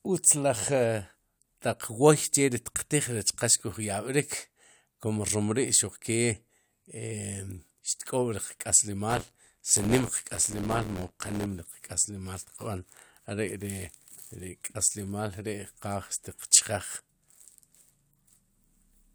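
A robotic buzz at about 86 Hz rattles through this speech from 9.09 to 11.46 s. This is buffer tearing: roughly a tenth of each period replays audio about 20 ms old, consistent with a 512-sample buffer.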